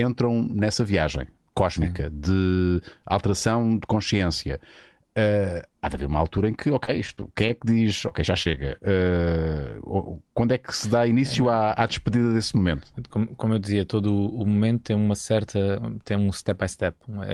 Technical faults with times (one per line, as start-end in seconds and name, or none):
6.85-7.51 scattered short gaps
8.09-8.59 repeated packet loss (robotic sound)